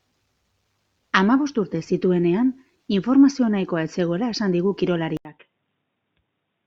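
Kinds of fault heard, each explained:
Input switched to a poorer device: At 5.17 s the speech drops out for 80 ms, then returns through a narrower, boxier channel with nothing above 3.8 kHz, running to the end of the clip. The level falls by roughly 10 dB and a new background noise appears, sitting about 50 dB below the speech. This abrupt change in bandwidth, level and noise floor is likely the system moving its input to a different, lower-grade microphone or headset profile mid-recording.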